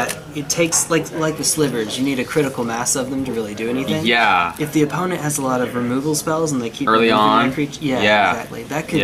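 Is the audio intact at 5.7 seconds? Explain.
Yes, the audio is intact at 5.7 seconds, with no fault to be heard at that moment.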